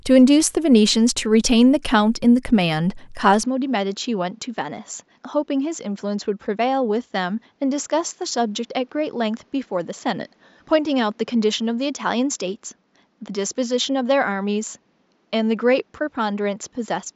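At 3.43 s the speech abruptly turns duller and a bit boxier, and it stays that way to the end. Nothing comes through above 7.5 kHz after that point, the level drops by a few decibels, and a faint new background noise sits well under the speech. There's no gap at the change, just an instant shift in tone. That pattern points to the input likely switching to a poorer device mid-recording, one with a narrower band and its own noise.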